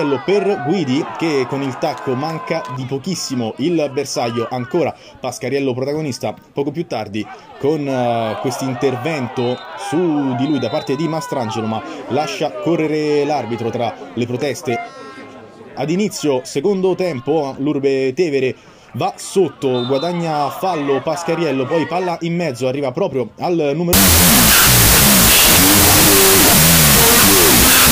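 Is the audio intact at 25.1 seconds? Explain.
No. From 23.93 s to the end there's a wrong sample width fault: loud noise with the sound buried underneath at half speed, which points to 32-bit float data being read as 16-bit integers.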